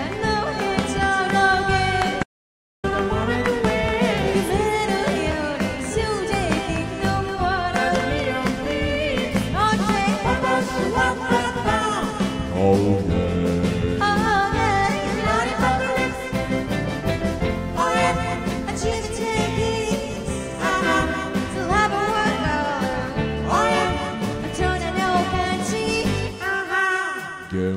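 Audio dropout to silence from 2.23 to 2.84 s: the sound cuts off abruptly and returns just as suddenly after about 0.6 s of silence, with no background noise. The input was likely lost while recording continued, so that stretch is gone.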